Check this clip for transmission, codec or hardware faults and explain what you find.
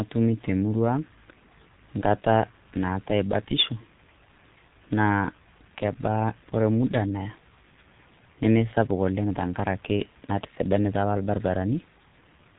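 There's one fault, and it runs through the whole clip: heavy G.723.1 codec damage. Nothing gets through above about 3.9 kHz, so the speech is muffled and boxy. The coder only models the voice in coarse frame-sized steps and refreshes that model slowly, so you get a hoarse texture and smeared consonants. That level of damage fits a very low-rate stream of around 6 kbit/s, the kind early internet telephony ran on.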